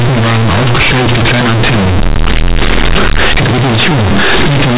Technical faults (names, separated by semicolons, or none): companded audio read as linear